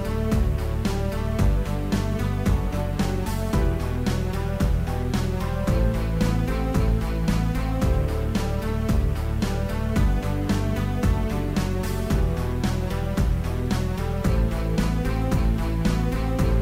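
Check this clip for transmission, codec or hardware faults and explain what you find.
One fault is present, running through the whole clip: low bit depth without dither. The likely cause is samples truncated to very few bits, which fits about 7-bit resolution, with no dither to break up the rounding error. That error tracks the signal, so quiet passages turn gritty and grainy, the faintest parts sputter or drop out, and the distortion sits roughly 30 dB below the sound.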